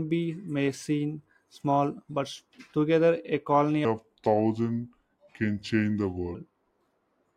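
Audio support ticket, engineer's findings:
Section at the wrong speed, 3.85–6.35 s. Likely playback or edit clocked against the wrong rate, running this stretch at 0.768x. Speech drops about five semitones and drags, slow and deep, then snaps back to normal pace at 6.35 s.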